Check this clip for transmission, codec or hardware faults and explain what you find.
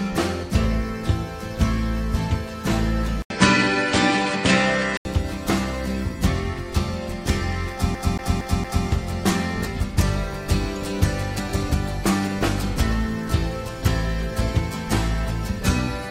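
Two faults are audible.

From 3.22 to 5.05 s the top end vanishes above 9.3 kHz, after an 80 ms silence, with a small level shift and a faint new noise floor. This is likely an input switched to a poorer device, whose narrower band and different character make the sound duller.

From 7.95 to 8.87 s the audio is caught like a CD stuck on one turn: a 0.23 s segment plays four times, with a brief mute at each jump. This is the even stutter of a laser repeatedly thrown back to the same point on the disc.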